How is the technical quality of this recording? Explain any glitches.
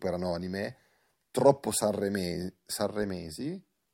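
The speech recording has no audible glitches or technical faults.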